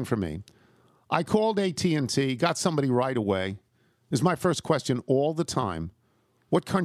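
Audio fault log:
No technical faults are audible anywhere in this speech recording, and the signal holds steady throughout.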